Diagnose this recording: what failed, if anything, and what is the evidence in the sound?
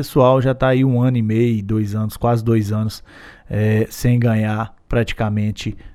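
Nothing in the recording points to a failure at any stage of the chain. The speech comes through without any audible defect to diagnose.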